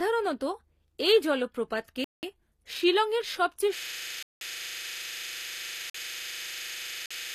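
Throughout, the speech has gritty, metallic sibilants and lispy s sounds, and there is no content above 14.9 kHz. The likely cause is HE-AAC compression at a low bitrate, around 24 kbps, rebuilding the treble from copied lower bands.

At 2.04 s a block of digital silence cuts in for 186 ms. It fits an 8192-sample buffer left unfilled.

From 3.78 s to the end, a system hang loop repeats one 40 ms piece of audio. That is a 25 Hz buzzing stutter from a frozen ring buffer.

Further silence blocks hit inside the loop. The one at 4.23 s lasts 186 ms. Those at 5.90 s and 7.06 s last 46 ms each. Each is a short hole.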